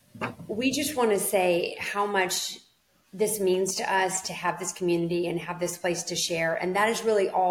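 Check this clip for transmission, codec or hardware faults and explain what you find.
One hardware fault is present. GSM signalling bursts from 3.54 to 4.65 s: a nearby phone's radio pulses, rectified by the circuitry, make galloping ticks and 217 Hz buzzes, well below the main sound.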